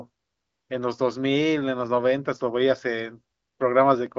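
No faults are audible in the speech; the band stops near 7.6 kHz, consistent with an AMR wideband (HD Voice) path at one of its upper rates.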